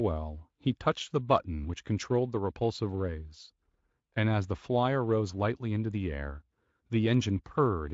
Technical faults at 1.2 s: none

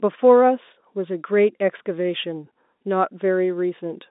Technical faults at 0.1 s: none

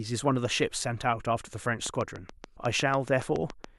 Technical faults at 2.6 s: train of clicks; compressed frames skipped

